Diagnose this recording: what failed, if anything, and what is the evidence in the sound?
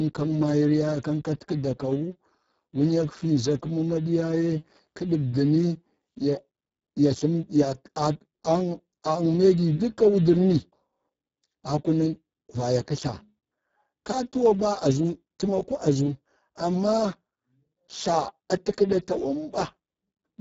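The speech sounds hoarse, buzzy and close to robotic for the full length, and the top above 4 kHz is a hissy, shaped fill that stops near 7.7 kHz. This is codec-stage damage from the Speex codec. Heavy CELP excitation starvation fits a very low bitrate around 6 kbps.

From 14.92 to 16.74 s the speech runs fast and sharp, about 5.4% quicker and 92 cents higher, close to a semitone, then snaps back. This is likely a drift correction step in the playback or buffer stage, where clock-matching software jumped the rate to drain its buffer.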